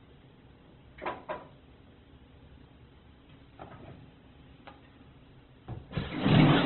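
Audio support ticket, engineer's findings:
Sounds muffled, grainy and rough throughout, with nothing above 4.2 kHz. Likely Opus compression: heavy damage at a rate that fits about 12 kbps, narrowband. Starved CELT bands get filled by folding or noise, so detail turns granular instead of swirling.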